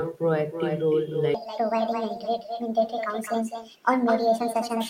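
It's a speech clip with an echo with no canceller running the whole way through. Every phrase comes back about 8 dB down and roughly a third of a second late, thin, as if the far end had the call on a speaker and nothing was removing the return trip. From 1.34 s to the end there's a section at the wrong speed. It plays 1.51 times too fast, so everything jumps up about seven semitones and sounds rushed and chipmunky. The likely cause is a player or edit running that stretch on the wrong clock.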